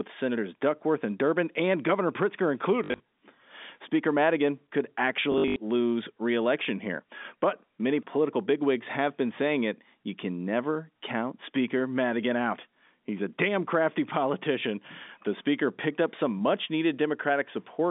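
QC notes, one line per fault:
2.84–3.0 s and 5.32–5.56 s, packet loss with last packet repeated: a robotic stutter with a 50 Hz buzz. About 120 ms, then 160 ms, went missing in runs of up to 60 and 80 ms. Each gap was filled by replaying the previous packet, which fits 20 ms packets, and the replays seldom line up with the pitch.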